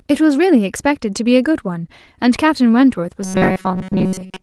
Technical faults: robotic sound from repeated short buffers

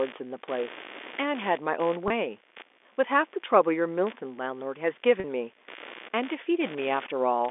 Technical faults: computer activity noise; packet loss with pitch repetition

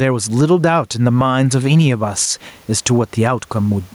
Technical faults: gain pumping

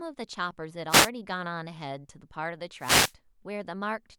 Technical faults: wireless microphone noise hit

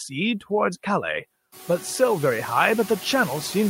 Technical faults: noise suppressor artifacts

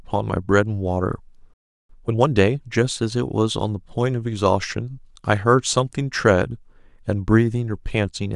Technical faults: playback stall; time-compressed catch-up

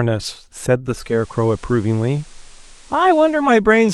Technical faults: digital radio blending to analogue

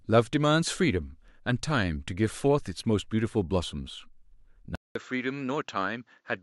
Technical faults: input switched to a poorer device

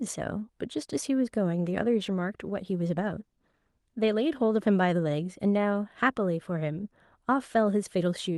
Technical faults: call bitrate drop

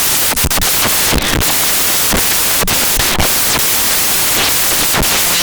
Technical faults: samples built from the wrong bytes

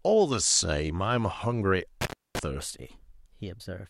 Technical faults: intermittent contact; section at the wrong speed

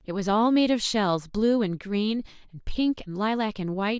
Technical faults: none

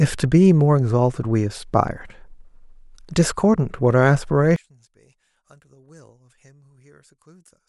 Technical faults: one channel inverted

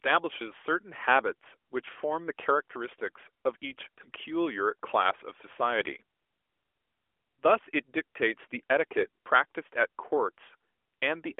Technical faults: none

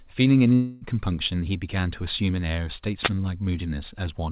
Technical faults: long network dropout; wireless microphone noise hit

